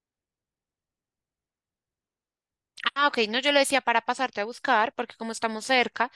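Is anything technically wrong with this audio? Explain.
Yes. A resampler restarted on every block runs from 4.7 s to the end at 6.16 s. The audio was resampled in separate 100 ms chunks, which fits a conversion from 48 kHz down to 24 kHz, and the converter was reset for each chunk. At each boundary it had no real neighbouring samples to work from, leaving a small error at every join. These errors are heard as a steady ticking at 10 Hz, riding on the speech wherever it is present.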